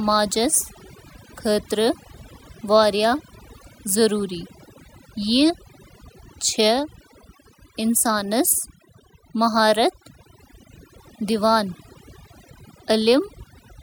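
A speech recording, affected from start to finish by overdone noise removal. The noise reduction was set too strong. It cuts individual frequency bands close to its noise estimate, taking quiet parts of the voice with them. The background drops and breaks up into twinkling specks.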